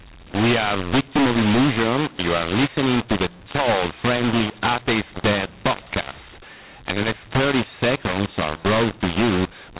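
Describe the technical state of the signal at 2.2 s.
At 2.2 s the speech sounds harsh and gritty, with levels jumping unevenly and a noisy hiss where quiet moments should be near silent. This is mu-law and A-law mixed up, present across the whole clip: the telephone audio was coded with A-law but decoded as mu-law, so each 8-bit code maps to the wrong amplitude. Some samples come out too loud, others too soft, and the faintest are pushed well above silence, all within a telephone band that stops at 4 kHz.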